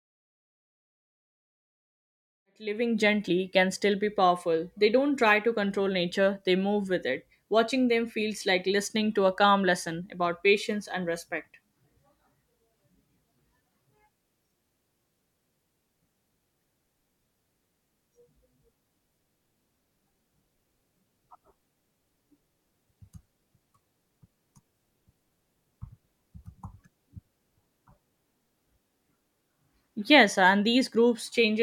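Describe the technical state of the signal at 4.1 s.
At 4.1 s the speech signal is intact, with no fault present at that moment.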